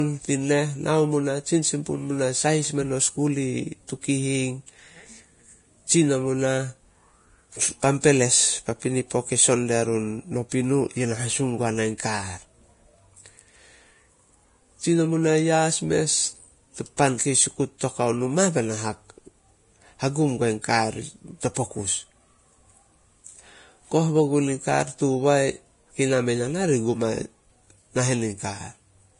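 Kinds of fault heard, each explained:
Low-bitrate audio saved at a high bitrate: the speech stops at 10.6 kHz and keeps codec smearing, likely from an earlier low-rate encode that the high-rate MP3 cannot undo, unlike simple filtering.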